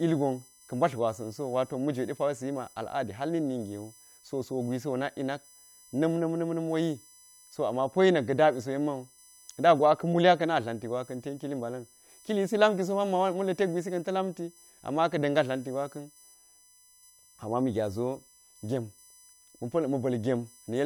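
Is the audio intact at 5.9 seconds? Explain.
No. USB whine runs throughout, including 5.9 s: 1 ms bus-frame current leaking through power or ground produces a steady 1 kHz tone and harmonics, strongest near 11 kHz, roughly 30 dB below the speech.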